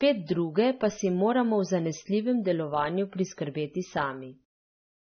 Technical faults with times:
0.00-5.11 AAC compression

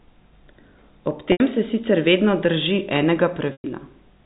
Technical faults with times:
1.32-1.40 packet loss with pitch repetition
3.52-3.64 packet loss with pitch repetition

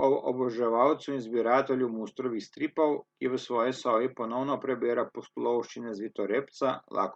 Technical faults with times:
none

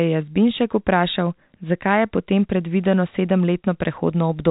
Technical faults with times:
none

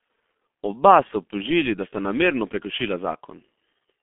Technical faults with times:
0.00-4.02 G.723.1 codec

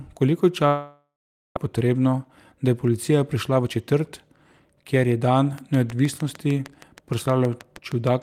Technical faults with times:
0.67-1.57 long network dropout
1.65-2.53 jitter buffer speed-up
3.35-5.21 jitter buffer speed-up
5.58-8.22 train of clicks

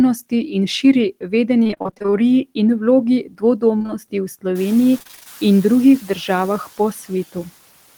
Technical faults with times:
1.63-2.14 repeated packet loss (robotic sound)
3.24-3.43 speech cut by the noise suppressor
3.78-3.91 short concealed packet loss
4.99-5.27 repeated packet loss (robotic sound)
6.02-6.29 speech cut by the noise suppressor

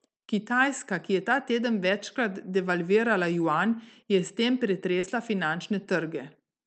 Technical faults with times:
4.99-5.05 short concealed packet loss

